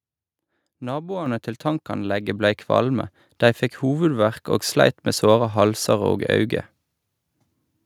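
At 1.26 s the microphone volume stepped up: the call software judged the input too quiet and raised the device gain by about 8 dB in a single jump. Speech and background noise get louder together. The waveform envelope widens abruptly at that point, and the spectrogram brightens evenly across all frequencies.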